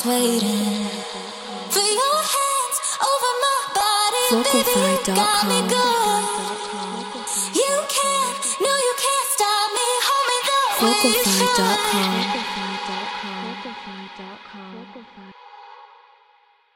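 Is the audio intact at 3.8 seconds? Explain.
No. At 3.81 s new audio failed to arrive in time, so the device replayed its last piece of about 1.45 ms, which fits a 64-sample buffer, two extra times. This repeated buffer sounds like a click or tiny buzz, replacing about 3 ms of sound.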